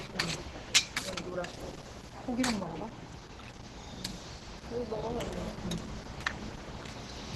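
Throughout the clip the sound is heavily degraded in a way that points to Opus compression at a low rate, likely near 12 kbps. Nothing is present above 12.1 kHz, so the top octave is cut and the audio sounds dull. The coarse, hoarse, muffled texture fits the encoder's hybrid mode, where the lower band is coded as speech and the upper band is roughly reconstructed, leaving tonal detail grainy and rough.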